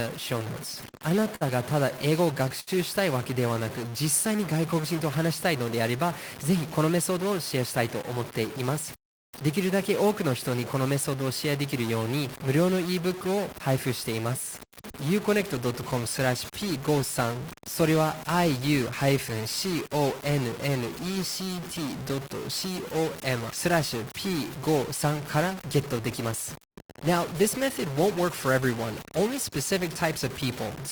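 A data line or converter likely has a stuck bit throughout this speech, adding noise or distortion to the whole clip and filling the pauses with noise. From 0.81 to 2.69 s, packets kept arriving late and the jitter buffer ran dry nine times. The receiver stretched the last sound across 194 ms of gaps, the longest 70 ms, so the speech stutters and drags with nothing missing. From 3.34 to 4.81 s, a jitter buffer slow-down rebuilt the reserve by repeating pitch periods, adding 98 ms. Playback drops to 94% speed at the same pitch, drawing sounds out. Jitter buffer speed-ups follow at 6.83 to 9.43 s and 26.21 to 28.48 s, each trimming about a tenth of a second of pitch periods to cut excess delay at 104% speed. Another at 29.19 to 29.80 s removes about 40 ms at 105%, and the speech sounds hurried at unchanged pitch.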